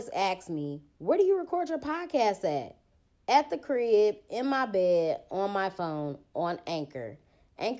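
Nothing in this speech recording stood out as a technical problem on listening.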